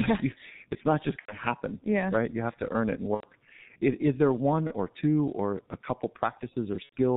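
Throughout, the speech is muffled and hoarse from the G.723.1 codec, heavily damaged at a rate consistent with about 6.3 kbit/s; the spectrogram shows nothing above 4 kHz and smeared consonant onsets. VoIP packet loss concealed by the speech codec occurs at 1.19–1.35 s, 3.14–3.26 s, 4.67–4.75 s and 6.83–6.94 s. Each time, the decoder stretches its last frame into a fading sound, visible as a shrinking waveform envelope.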